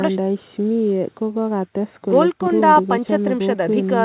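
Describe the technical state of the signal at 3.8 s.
At 3.8 s the speech is intact, with no dropout, glitch or distortion, only the narrow band of the call path, with nothing above 4 kHz.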